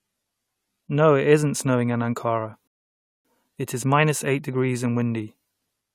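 At 2.68 s a rebuffering stall halts the speech for about 0.57 s, until 3.25 s; unlike a dropout, playback resumes exactly where it stopped, losing nothing.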